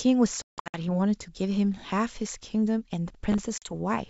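From 0.42 to 0.82 s, packet loss on an ADPCM call punches silent holes into the speech: 280 ms missing across a 320 ms stretch, the longest run 160 ms, which suggests roughly fifteen lost packets. The waveform shows flat, hard-edged gaps. After each gap the decoder's predictor and step size no longer match the sender's, so the speech returns slightly distorted before settling.

Between 3.10 and 3.39 s, processor overload crackle tears through the sound. Around fifteen missed deadlines on buffers of roughly 3 ms each leave tiny silent dropouts. They are heard as gritty crackle and appear as thin vertical broadband streaks on a spectrogram.

From 3.58 to 3.73 s, a second packet loss removes 40 ms, about two packets. It leaves a short blank column in the otherwise clear G.722 wideband band, followed by slightly distorted speech as the decoder resynchronises.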